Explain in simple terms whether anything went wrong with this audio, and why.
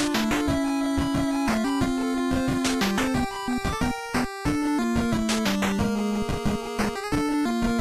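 Nothing went wrong here; every moment of the audio sounds just as it should, with no slips, gaps or glitches anywhere to point to.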